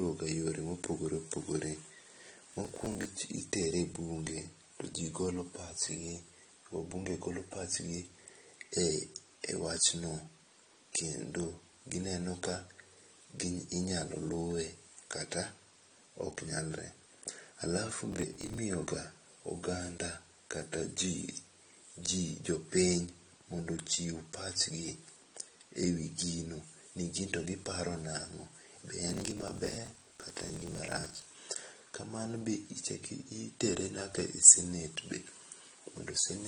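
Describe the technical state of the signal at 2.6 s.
At 2.6 s the speech is torn by a gritty burst of crackle running from 2.52 to 3.05 s. This is processor overload crackle: around twenty buffers of roughly 10 ms each missed their deadline, and each gap was filled with stale audio that starts and stops with hard edges.

Under that, the sound is dull and smeared, with a plainly audible warbling fizz, and nothing at all above 9.7 kHz. The cause is likely AAC compression, AAC-LC at a low bitrate that fits about 32 kbps, dropping the top of the spectrum and thinning what remains.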